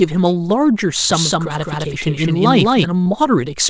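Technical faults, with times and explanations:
1.11–2.85 s, doubled audio track: Most likely a second capture path or misaligned edit added another copy of the audio, trailing the original by about a fifth of a second at roughly equal level, so everything sounds spoken twice, with a dry full-band echo that begins and ends abruptly.
3.04–3.08 s, short concealed packet loss: About 20 ms of the call reached the decoder too late, so the receiver extended the preceding sound to bridge the hole and then blended back, leaving a brief smear within the G.722 call audio, whose band stops at 8 kHz.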